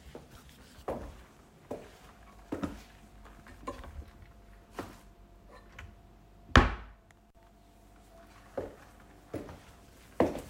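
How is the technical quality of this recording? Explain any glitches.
There is one glitch. At about 7.28 to 7.35 s the sound drops out for roughly 35 ms, with crackle at each edge. This is an intermittent contact: a loose cable or plug briefly broke the signal path.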